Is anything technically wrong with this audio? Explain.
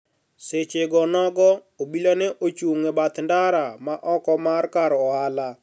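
No, nothing technically wrong stood out on listening to this speech recording.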